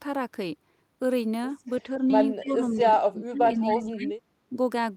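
From 2.40 to 2.46 s there is an echo leak: a faint copy of the speech, about 25 dB down and 271 ms late. A far-end echo canceller likely let it through. It returns at 3.67 to 3.75 s.

Speech suppressed in double talk begins at 2.42 s. The level dips by about 15 dB until 2.9 s. From 3.1 to 4.12 s it drops harder, by about 25 dB, for roughly a second. At 4.49 to 4.55 s there is a brief dip of about 5 dB. An echo canceller likely ducked this speech while both sides were active.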